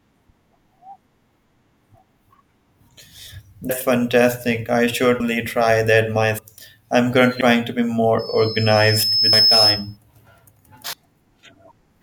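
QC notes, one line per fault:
3.70, 5.20, 6.38, 7.41, 9.33 and 10.93 s: compressed frames skipped. The sound jumps ahead by about 0.15 to 0.4 s, consistent with whole 32 ms frames dropped.
8.18–9.97 s: loudspeaker feedback squeal. A 5.2 kHz tone swells over about a second to roughly 5 dB above the signal, as the microphone-loudspeaker loop exceeds unity gain.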